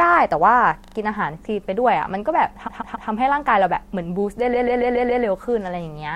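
Repeated frames stutter the speech at 0.84–0.95 s, 2.67–3.08 s and 4.53–5.23 s. Blocks of 38, 139 and 129 ms replay three, three and five extra times, stretching the clip. Unlike echo, each copy restarts abruptly at full level.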